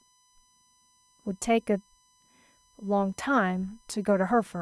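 USB whine runs throughout the clip, a steady tone locked to 1 kHz with its strongest component at 6 kHz, the sixth multiple. The USB bus pulls current in regular 1 ms frames, and that pulsing load leaks into the audio path through shared power or ground, so the whine holds a fixed pitch rather than following the speech. It sits roughly 40 dB below the speech, a thin high-pitched trace most audible in the gaps.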